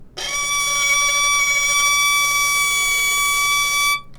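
From start to finish the sound has a wrong sample rate fault. Everything plays about 1.38 times too fast and sits about 5.5 semitones high, which fits material recorded at 32 kHz being played at 44.1 kHz with no conversion. Unlike a pitch shift or a time-stretch, which alter one property alone, here pitch and tempo rise together by the same ratio, so the events sound both hurried and shrunken.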